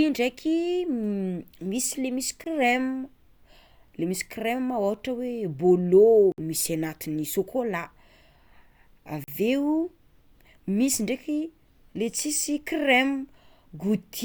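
Three times, the output most likely went unfilled and blocks of samples fell to zero: a block of digital silence at 2.44–2.46 s (20 ms), 6.32–6.38 s (60 ms) and 9.24–9.28 s (40 ms). The speech cuts hard to silence and back. The shortest sounds like a very short hole, the longest like a brief hole.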